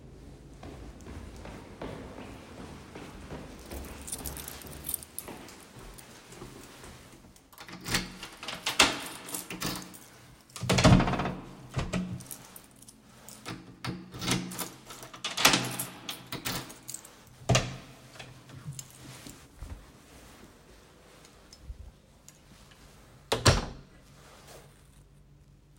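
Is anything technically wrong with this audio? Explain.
Yes. From 1.17 s to 24.30 s, a regular click recurs every 1.93 s, about fifteen times. This is likely clock drift buffer slips. Two clocks differing by a few hundred parts per million make a buffer periodically drop or repeat a few dozen samples.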